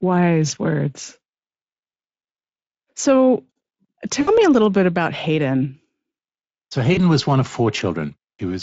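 At 4.21 s and again at 6.93 s, speech packets went missing and the Speex decoder performed VoIP packet loss concealment, extrapolating from its last pitch and filter. The 60 ms gap before "a little bit about" and the 40 ms gap before "was one of" become a brief, fading smear of stretched sound.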